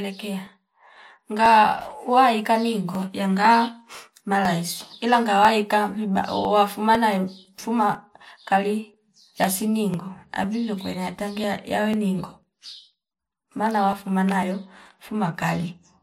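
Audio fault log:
0.47–15.93 s: periodic USB or driver dropouts, around a millisecond of speech skipped every 0.5 s, leaving regular ticks, seen as evenly spaced thin vertical spectrogram lines and waveform discontinuities.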